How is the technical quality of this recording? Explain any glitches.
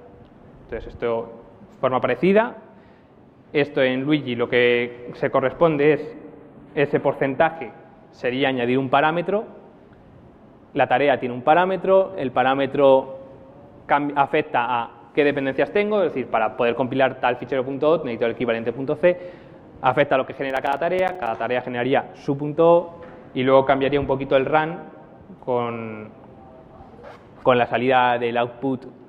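The recording has two distinct glitches, one tonal and one rhythmic.

From 5.83 to 7.55 s there is channel delay (comb filtering). One channel runs late by roughly a tenth of a millisecond, which fits an offset of about four samples. When the channels are combined, their shared content cancels at evenly spaced frequencies, with the first notch near 5 kHz. The top end turns hollow and slightly dulled. Unlike a simple treble cut, the loss comes from fixed notches rather than a smooth roll-off, and it sounds phasey rather than just muffled.

From 20.50 to 21.27 s there is processor overload crackle. The processor missed deadlines for its small audio buffers many times in a row, which fits buffers of around 5 ms and points to roughly fifteen misses. Each miss left a short silent gap with hard edges. Together they produce a gritty, tearing crackle over the sound for under a second. A single dropout would be one clean hole; here the gaps cluster densely and then stop as the load clears.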